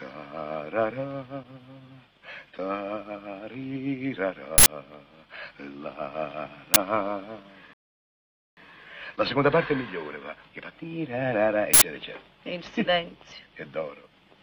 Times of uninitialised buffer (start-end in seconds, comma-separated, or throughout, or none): 4.58-4.66, 6.74, 11.74-11.82